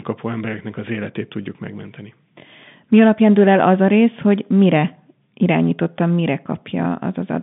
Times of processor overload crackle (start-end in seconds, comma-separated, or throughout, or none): none